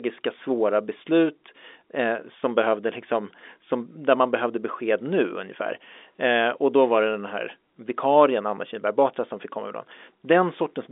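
Nothing stood out on listening to this telephone-band speech.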